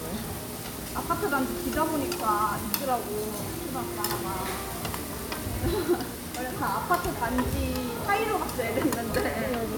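No technical faults can be heard anywhere in the audio.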